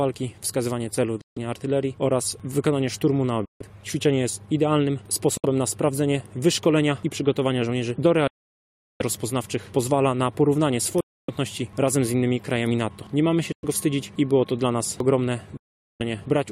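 The sound cuts to silence seven times: at 1.21 s for 0.15 s, 3.45 s for 0.15 s, 5.37 s for 0.06 s, 8.27 s for 0.73 s, 11.01 s for 0.28 s, 13.52 s for 0.11 s and 15.57 s for 0.43 s. Each gap starts and ends sharply or with a fade of a few milliseconds, and the audio picks up further along rather than where it stopped. This is likely a Bluetooth dropout, with packets reaching the headphones too late to play and being discarded.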